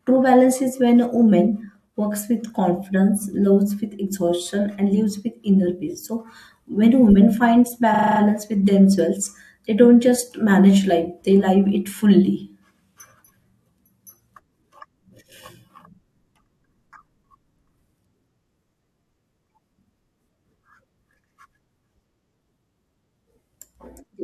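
In this speech clip, a short run of compressed frames was delivered more than once, so the decoder played the same slice of audio again and again. These repeated frames occur from 7.94 to 8.19 s. A block of about 42.7 ms, which fits two codec frames, sounds six extra times. The result is a rapid mechanical stutter. The passage runs 256 ms longer than it should.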